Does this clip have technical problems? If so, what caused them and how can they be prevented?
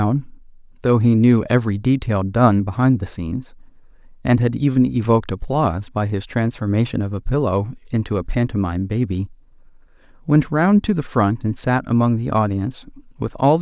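No, no technical faults heard.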